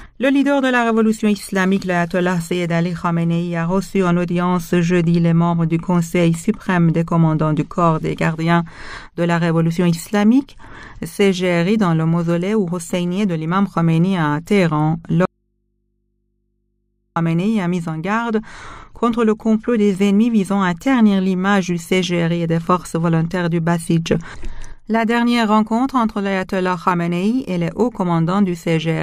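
An audio dropout to a faint residue runs from 15.25 to 17.16 s, about 1.9 s: the sound cuts off abruptly, leaving only mains hum roughly 50 dB below it, likely from a live but disconnected input, unlike a pause or fade, which would not hum.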